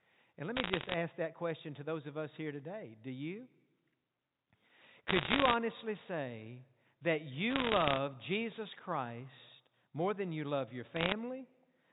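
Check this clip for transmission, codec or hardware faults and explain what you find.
One transmission fault is audible: bit errors on a digital phone line. They come in four short bursts, at 0.56–0.94 s, 5.08–5.54 s, 7.50–7.98 s and 10.96–11.12 s. Flipped bits on the 64 kbps G.711 mu-law link each corrupt one sample. About one bit in a hundred goes wrong, a little fewer in the last burst. Hits on high bits, or on the sign of a loud sample, make sharp ticks. Together they sound like crackle laid over unchanged speech.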